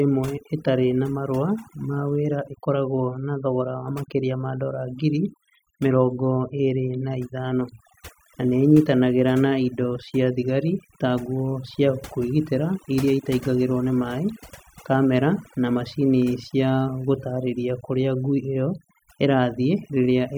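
Overdone noise removal runs throughout the speech. Strong noise reduction cut bands near the noise estimate, leaving near-silent gaps with twinkling specks.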